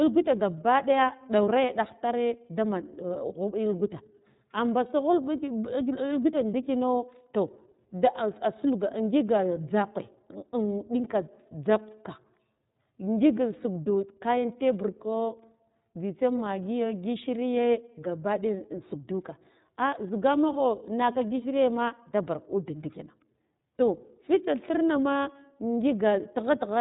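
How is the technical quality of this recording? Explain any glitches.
The technical quality is limited by one fault heard throughout: the whole recording has passed through the iLBC codec, and the damage is plainly audible. The speech stays intelligible but sounds band-limited and slightly rough, with a synthetic, buzzy edge. Nothing above 4 kHz survives, so sibilants lose their air. iLBC codes each frame's excitation independently of the previous one, and the coarseness here fits its 30 ms frame mode at about 13.3 kbps.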